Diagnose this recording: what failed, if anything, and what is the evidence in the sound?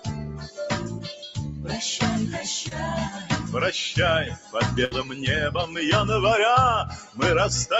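The call processing has a speech-oriented noise suppressor running on material it wasn't built for. Throughout the clip it treats steady, sustained content as noise and pulls it down, so the level swings by roughly 10 dB as the gain rides up on attacks and back down on held portions. The result is a pumping, breathing quality, with sustains and tails thinning instead of ringing out naturally.

The same suppressor also leaves specific dips where it clamped down hard. These fall at 0.00–0.59 s (about 11 dB down), 0.91–1.06 s (about 6 dB), 3.09–3.30 s (about 9 dB), 4.32–4.54 s (about 10 dB) and 6.89–7.21 s (about 13 dB). In each one the sound sinks or its decay gets chopped short, because the gain estimator decided that stretch was background and gated it.

Around 2.68–2.72 s there's a short concealed packet loss on the network side. About 30 ms of audio didn't arrive in time, and the decoder's concealment papered over roughly 24 ms by extending the last bit of signal before crossfading back into real data. 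To the ear it's just a brief smear or wobble, a tiny glitch rather than a clear dropout.

At 4.85–4.92 s a burst of packet loss takes out about 60 ms. The receiver fills roughly 63 ms by continuing the previous sound and fading it, so you get a held, decaying stretch. When real audio returns it has jumped ahead, and the content in the gap is simply gone. That points to consecutive packets lost or arriving too late for the jitter buffer, not to anything at the source.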